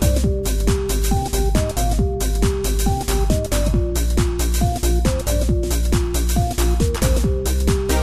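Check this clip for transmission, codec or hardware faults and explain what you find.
One codec fault is present, a pre-echo at 0.43 s. A sharp attack there is preceded by a hiss lasting 19 ms. The codec spread noise over a 36 ms window without switching to short blocks, so noise about 12 dB above the quiet lead-in smears the attack.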